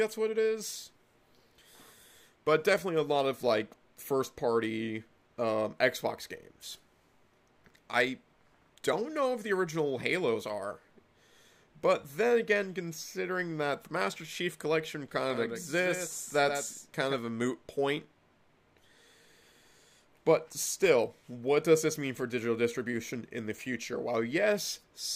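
From 15.3 to 17.14 s the sound is a doubled audio track. A second full-band copy trails the original by roughly 150 ms, around 10 dB quieter. It has no decay or room colour. It starts and stops abruptly. The likely cause is a slower second capture path or an edit holding two out-of-step copies.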